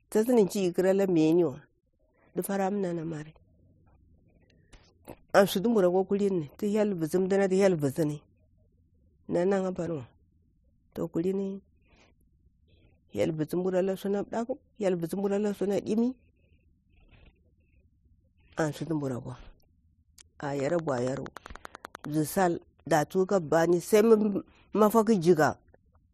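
A train of clicks runs from 20.60 to 22.06 s: about fifteen regular pops at 10.4 per second, likely interference, ticking slightly louder than the speech.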